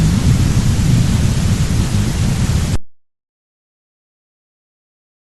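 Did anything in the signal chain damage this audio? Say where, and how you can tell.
Yes: compressed frames skipped at 0.49 s and 2.31 s (codec stage). The sound jumps ahead by whole 20 ms frames.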